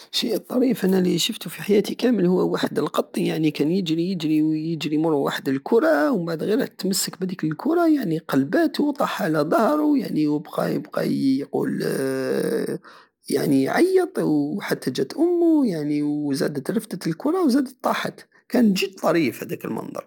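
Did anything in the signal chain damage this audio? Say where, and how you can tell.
No, nothing in the chain damaged this speech.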